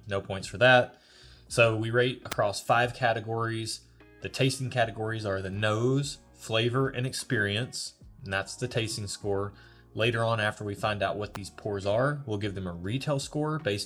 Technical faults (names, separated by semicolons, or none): electrical switching spike